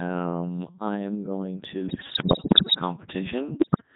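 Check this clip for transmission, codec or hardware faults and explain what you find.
Two faults are present: a very low-rate vocoder colours the whole clip, and two bursts of corruption break the voice apart.

Throughout the speech the voice sounds robotic and buzzy, as if rebuilt from tones. This is the Codec 2 vocoder, heavily degraded, at a rate that fits its 3.2 kbit/s mode. It transmits only pitch, voicing, energy and spectral shape, and the decoder resynthesises the voice from sine waves rather than preserving the waveform.

From 1.89 to 2.76 s, and again from 3.60 to 3.82 s, the voice lurches in pitch, loudness and tone, warbling into bleeps and garbled robotic noise. These are bit errors on digital voice radio, at around one bit in ten. Each flipped bit corrupts parameters for an entire frame.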